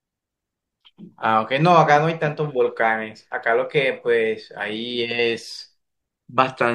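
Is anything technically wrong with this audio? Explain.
No, nothing technically wrong can be heard in this speech clip. There is no technical fault to explain.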